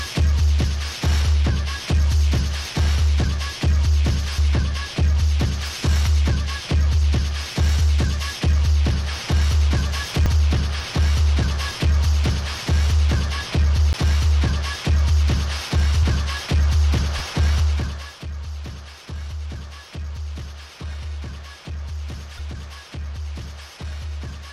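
At 4.37 s, a brief glitch marks damaged data in a compressed stream. The decoder misreads corrupted frames, loses sync and searches for the next frame header. The same blip recurs at 10.26, 13.93, 16.02 and 22.38 s.

From 6.63 to 6.65 s, the sound jumbles. These are chunks out of order: a 10 ms chunk plays one chunk late, leaving hard joins. This recurs from 17.18 to 17.20 s.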